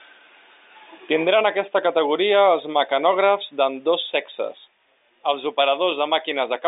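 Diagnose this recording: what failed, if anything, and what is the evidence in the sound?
Nothing failed: the speech sits in a telephone band of roughly 250 Hz to 3.7 kHz with nothing above 3.8 kHz, consistent with the 8 kHz-sampled G.711 path at 64 kbps (A-law) working as designed.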